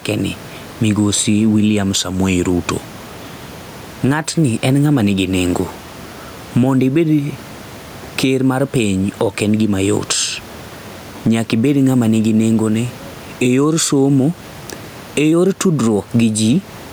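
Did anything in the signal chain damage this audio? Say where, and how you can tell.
Yes. Gain pumping throughout, likely from a fast limiter in call processing acting on excessive mic gain: room noise swells about 10 dB in pauses, ducking under loud sounds.

Drift correction steps, likely a clock-matching buffer changing rate abruptly: 1.95–3.57 s plays 5.8% slow, about a semitone flat; 15.32–16.73 s plays 5.8% fast, a semitone sharp.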